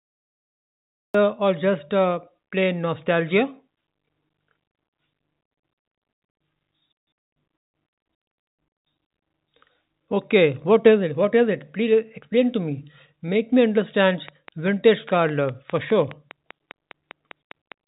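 For the first 1.14 s there is pure digital silence, and the speech then appears abruptly at 1.14 s, already under way, with no attack or fade-in to ease it in. This is a cut-off start: the capture or stream began late, after the talker had started, so the opening of the sound was simply never recorded and the waveform jumps from silence straight into the middle of an utterance.

From 14.08 s to the end of the clip, a steady ticking runs over the speech, and it carries on through the pauses as well. The clicks arrive at a regular pace of about five per second, each with much the same shape, and they peak at about 5 dB above the speech itself, so they sit clearly on top of it. This is a train of clicks, likely caused by interference from nearby equipment or a faulty connection or power supply, injecting a repeated pulse into the signal. The ticking stays audible against the narrowband, call-like sound of the G.711 mu-law path, which carries nothing above 4 kHz.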